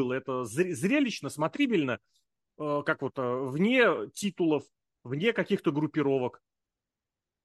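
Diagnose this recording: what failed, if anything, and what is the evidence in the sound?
Nothing failed in this recording, and the sound carries no evidence of a fault at any stage.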